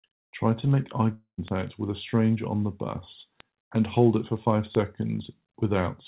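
At 1.14 s the speech breaks off for about a quarter of a second, until 1.40 s. The last sound is stretched into a buzz or hiss that fades. Near its end, about 110 ms of near-silence remains. When the speech resumes, roughly 240 ms of it is simply gone. This is a long network dropout, likely caused by packets that never reached the receiver. The concealment filled the gap instead of replaying it. The band-limited sound, with nothing above 4 kHz, fits a G.711 call path.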